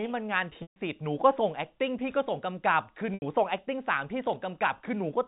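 At 0.62 s the speech briefly freezes into a held, buzzy tone that fades to silence before the speech resumes with a soft cross-fade at 0.76 s. The same happens more briefly from 3.14 s to 3.22 s. This is packet loss with pitch repetition: 140 ms and then 80 ms of audio went missing, gaps consistent with several short packets each. The receiver filled each hole by repeating the last pitch period and faded it out, all within the 4 kHz band of the G.711 telephone coding.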